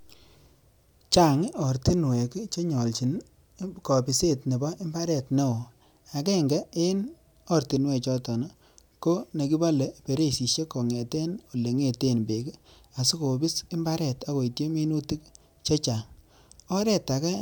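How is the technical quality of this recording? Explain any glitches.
No technical faults are audible.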